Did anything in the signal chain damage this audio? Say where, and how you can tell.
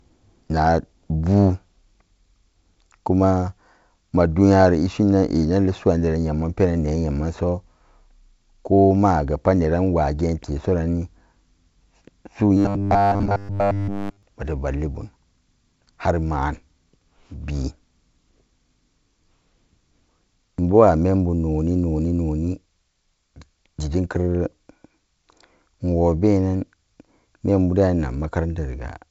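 Yes: robotic sound from repeated short buffers at 12.57–14.23 s, likely a starved driver buffer looping 10 ms blocks, giving a 100 Hz buzz seen as evenly spaced spectrogram stripes.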